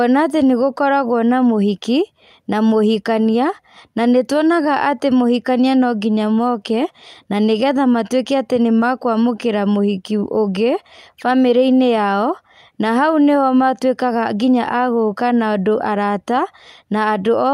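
No technical faults are audible anywhere in the speech.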